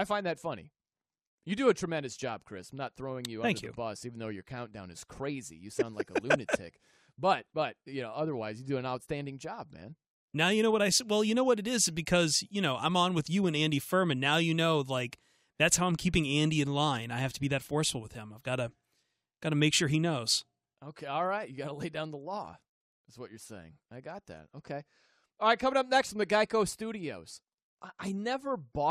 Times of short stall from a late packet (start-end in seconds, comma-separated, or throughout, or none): none